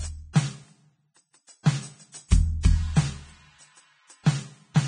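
The whole music clip has nothing above 9.7 kHz and sounds hissy and grainy. Tones feel roughened and attacks blurred. This is likely Vorbis compression at heavy settings, which fits a bitrate near 22 kbps. The treble detail was quantised into noise.

From 1.63 to 1.66 s there is pre-echo. A sharp attack fell late in a coding block. Noise meant for the loud part spread about 26 ms ahead of it. A brief hiss leads in, and the attack sounds smeared.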